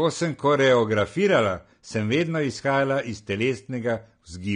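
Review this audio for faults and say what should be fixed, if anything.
Throughout the speech, nothing reaches above 9.7 kHz and the remaining band sounds smeared and warbling, most likely AAC compression at a low bitrate, fitting roughly 32 kbps. Unlike a plain low-pass filter, the texture itself is damaged, not just dulled. Encode at a higher bitrate or keep a lossless copy.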